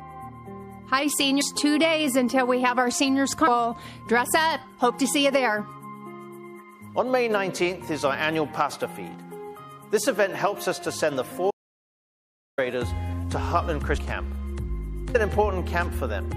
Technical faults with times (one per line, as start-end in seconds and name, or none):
0.00-16.36 MP3 compression
1.40 compressed frames skipped
11.51-12.58 audio dropout to silence
13.96 compressed frames skipped
15.14 compressed frames skipped